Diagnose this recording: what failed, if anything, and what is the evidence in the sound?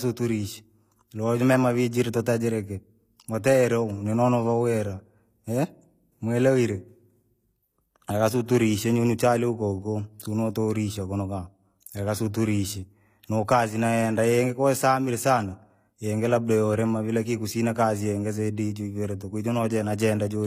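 The trouble sits at the codec stage: the speech carries plainly audible HE-AAC compression damage throughout, with s sounds gritty and lispy and nothing above 14.9 kHz. The treble is likely rebuilt by band replication, copied up from lower bands, which fits a low bitrate around 24 kbps.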